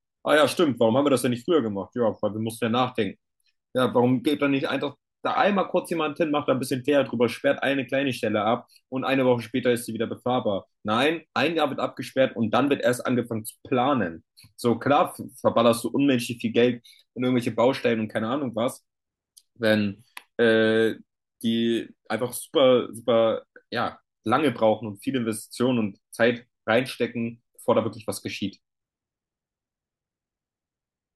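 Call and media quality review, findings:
No faults found in the speech recording. Nothing to escalate for this clip.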